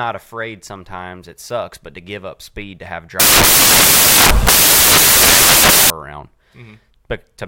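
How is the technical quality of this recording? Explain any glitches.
The recording has one clear glitch. From about 3.20 to 5.90 s the samples are built from the wrong bytes: the reader pairs or orders each sample's bytes incorrectly, so the busy low-order bits end up as the most significant part of every value. The speech gets buried under loud, harsh broadband noise for that stretch.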